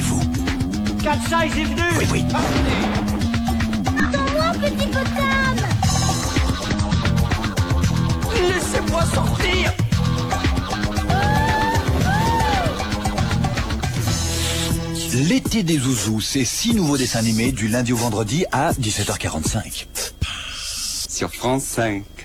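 At 4.00 to 4.06 s and again at 6.69 to 6.75 s, damaged data in a compressed stream produces short glitches of about 60 ms each. Corrupted frames there leave the decoder misreading the bitstream and resynchronising at the next valid frame header.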